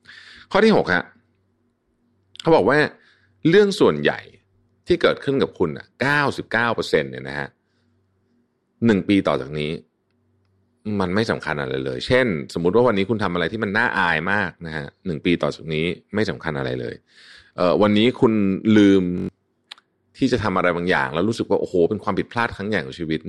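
At 19.18 to 19.29 s, a system hang loop: the computer or driver froze while one 21.33 ms buffer, fitting 1024 samples, replayed five times, producing a 46.9 Hz buzz.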